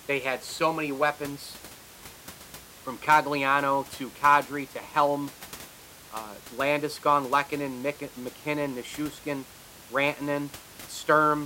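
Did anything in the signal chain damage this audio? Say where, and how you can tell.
No, none of the stages in the chain has left any damage that can be heard in this speech recording. The only thing beneath the speech is the room's own background noise, sitting about 20 dB lower, which belongs to the recording space rather than the equipment.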